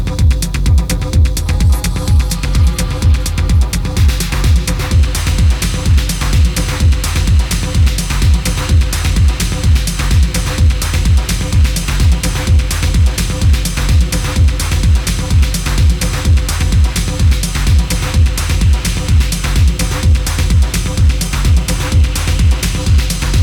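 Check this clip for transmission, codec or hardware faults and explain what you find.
Nothing in this clip points to a fault. The audio holds steady throughout, and there is nothing to report.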